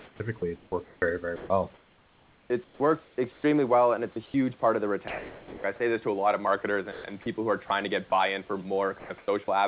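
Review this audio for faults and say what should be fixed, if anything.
The sender's voice detector likely toggled transmission on and off repeatedly, causing sound chopped by the voice detector from 0.0 to 1.02 s, 1.36 to 3.44 s, 6.92 to 7.26 s and 9.0 to 9.48 s. Quiet stretches were swapped for synthetic noise, about 1.3 s of it in the second span, so the audio sounds choppy.

The detector likely misjudged quiet speech as background and stopped sending, producing sound dropped by the voice detector right after "well and" at 4.12 to 4.16 s, from 5.08 to 5.64 s (about 0.36 s of speech lost), and at 7.68 s between "who are" and "to get buy in". Each time, the speech gives way to steady noise or near silence until transmission resumes.

Discontinuous transmission likely paused the stream between "well and" and "part of the", from 4.12 to 4.34 s, putting comfort noise in place of the background. 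The real room noise, sitting about 35 dB below the speech, is replaced by a smoother synthetic noise of a different tone or level. The audio passed through the G.711 call path, with nothing above 4 kHz.

To fix this, disable discontinuous transmission on the sender, or make its voice detector less aggressive and give it a longer hangover, so quiet speech and word endings keep being transmitted.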